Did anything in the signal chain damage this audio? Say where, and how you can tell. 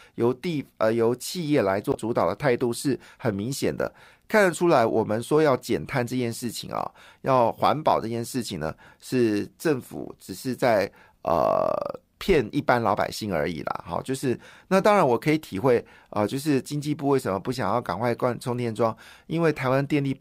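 Yes: damaged data in a compressed stream at the codec stage, 1.91–1.96 s. The decoder misread corrupt frames and resynced, leaving a broadband spectrogram smear and an abrupt waveform jump.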